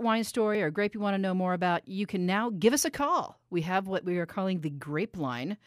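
At 0.55 s a block of digital silence cuts into the speech. About 0.73 ms of samples drop out with no fade. The gap is too short to be heard as silence and comes across as a tick or dip.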